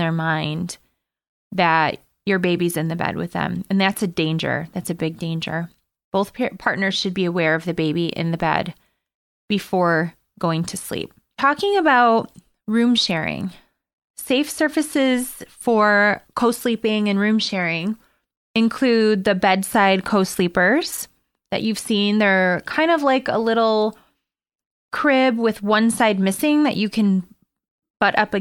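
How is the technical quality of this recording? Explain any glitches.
No glitches turn up anywhere in this recording, so there's nothing here that needs explaining.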